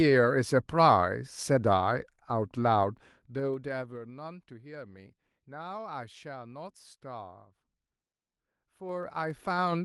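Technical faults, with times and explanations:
2.76–4.11 s, zipper noise: the level falls by roughly 20 dB in unsmoothed 2 dB steps, around seven a second, and each jump clicks, giving an audible ticking over the sound.
8.82–9.84 s, zipper noise: the same stepped 2 dB gain change reverses, rising by roughly 20 dB to the end of the clip, and the steps again produce a zipping tick.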